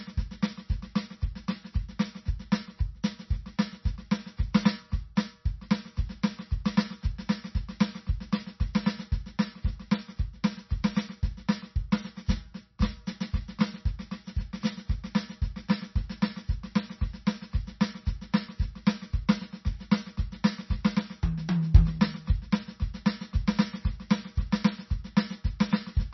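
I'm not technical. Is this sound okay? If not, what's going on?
No. Throughout the music, from start to finish, the sound is dull and watery, with nothing above about 5.9 kHz. This is likely heavy MP3 compression: squeezing the file very small cuts off the treble and discards quieter detail.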